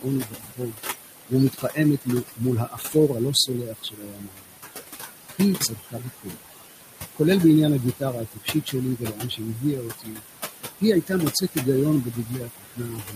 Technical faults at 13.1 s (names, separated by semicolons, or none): noise suppressor artifacts; speech cut by the noise suppressor